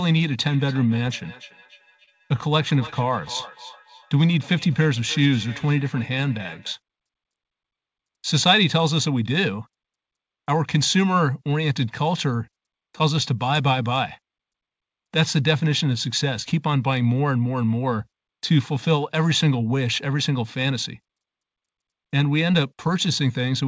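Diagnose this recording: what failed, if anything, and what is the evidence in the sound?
Feedback echo between two devices (call processing), 0.49–6.75 s: another device's playback re-enters the microphone, returning sound every 300 ms or so, about 19 dB down. The spectrogram shows evenly spaced delayed copies.

Short stall from a late packet (network, jitter buffer), 2.04–2.10 s: a late packet left the buffer empty, so 35 ms of held sound fills the gap. The waveform shows a stretched, repeated stretch; nothing is lost.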